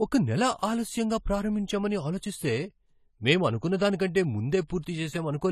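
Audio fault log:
Throughout: AAC compression, likely low-bitrate AAC-LC at around 32 kbps, with plainly audible damage. Nothing is present above 14 kHz, so the speech sounds dull, and coarse quantisation of the spectrum leaves a smeared, warbling, fizzy texture on sibilants and sustained sounds.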